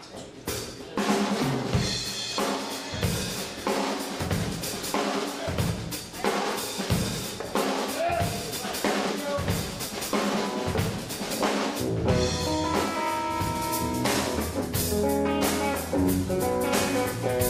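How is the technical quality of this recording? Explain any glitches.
The recording has two faults near the end.

From 13.55 s to the end, pre-emphasis is left on: a 50 µs FM-style treble boost was never de-emphasised, lifting 10 kHz about 10 dB relative to 1 kHz. It sounds thin and hissy, and the spectrogram shows brighter upper bands.

At 14.89 s, a corrupt frame is decoded: damaged bits in what sounds like a single frame were played anyway, placing energy at wrong frequencies. It is heard as a brief glitch, seen as a short vertical smear and a spike peaking near -20 dBFS.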